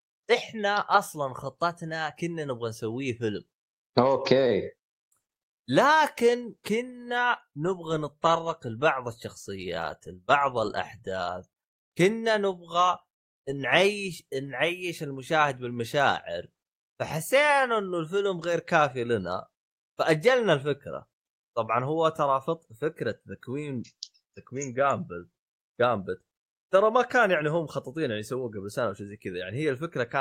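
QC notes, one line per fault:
No faults found in this speech clip. Nothing here needs a QC note.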